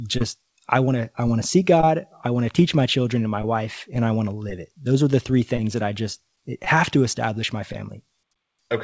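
A speech recording that drags slightly and unevenly, with small stutters scattered from 0.38 s to 8.39 s, where repeated timing corrections stretch the passage to about 97% of its natural pace and add roughly a fifth of a second overall. The stretches run unevenly, so the rhythm wobbles rather than simply slowing. The cause is clock drift between sender and receiver. The sending device's audio clock runs about 3% slow relative to the receiver's, so audio arrives a little more slowly than it is played out. The jitter buffer keeps draining, and to avoid running dry the receiver fills the gaps by repeating short pieces. Those insertions, all in the same direction but irregularly spaced, make the small hiccups. The call's G.722 path at 64 kbps adds its usual coding noise and leaves no content above 8 kHz.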